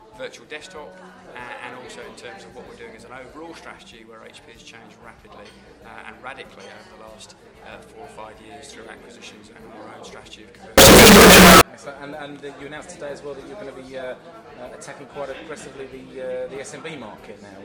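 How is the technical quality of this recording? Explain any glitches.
One glitch stands out. From 10.78 to 11.61 s, the audio bursts into very loud, harsh distortion, with quiet moments as loud as the rest. The likely cause is a signed and unsigned mix-up, flipping the top bit of 16-bit samples so each zero crossing jumps across the full range.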